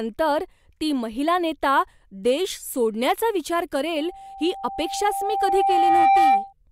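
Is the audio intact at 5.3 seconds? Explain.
No. At 5.3 s a 783 Hz tone swells over the speech. This is loudspeaker feedback squeal, running from 3.98 to 6.53 s and rising over about two seconds to roughly 10 dB above it. A microphone picks up its own loudspeaker, and at that frequency the loop gain exceeds one.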